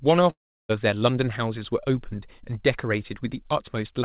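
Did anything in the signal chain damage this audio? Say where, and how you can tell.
Yes, at the network stage: a long network dropout from 0.3 to 0.71 s in this speech. About 0.4 s of audio never arrives. The receiver stretches the last sound into a fading buzz that dies to near silence, and then the speech resumes with that stretch missing. On a spectrogram, a smeared band fades into an empty gap under the 4 kHz ceiling of the G.711 path. The waveform shows a decaying tail, then flatline. Packet loss is the likely cause.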